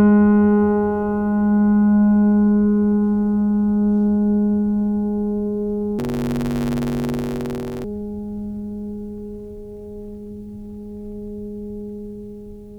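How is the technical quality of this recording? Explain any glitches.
The music has one glitch, from 5.98 to 7.84 s: a block size mismatch (truncated). One stage appears to write blocks of 512 samples, and the next reads shorter ones, so the tail of each block is discarded. The result is a 100 Hz buzz at the block rate, and the music runs 1.16 times fast with its timbre intact.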